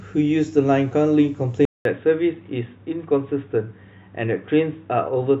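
At 1.65 s the speech drops out for 200 ms. It returns dull, quieter and with faint background noise, capped at 3.8 kHz: the input likely switched to a poorer device.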